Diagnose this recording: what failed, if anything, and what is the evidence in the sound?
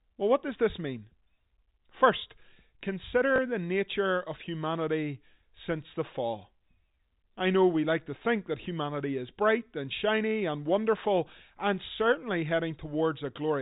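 The network dropped a packet, and the receiver covered it by repeating the last one, a packet loss with last packet repeated. At 3.36 to 3.38 s, just before "the nature of humanity," there's a small blip where the 20 ms packet is repeated, heard through the G.711 telephone band.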